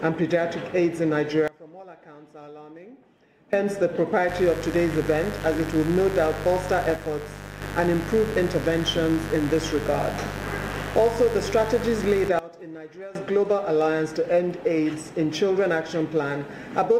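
At 1.48 s the sound and its background noise drop together by about 22 dB, then snap back at 3.53 s. This sudden gain jump is likely a digital gain change applied between two samples with no ramp.

From 4.29 s to 12.29 s a steady, raspy buzz sits roughly 10 dB under the sound. This mains buzz comes from sharp switching spikes twice per 50 Hz cycle, with harmonics reaching several kilohertz, from a dimmer, rectifier or missing shield.

Within that stretch, from 6.96 s to 7.61 s, the level falls abruptly by about 6 dB, and just after the buzz ends it falls again by about 16 dB from 12.39 s to 13.15 s. Both are sudden gain jumps with the same likely cause.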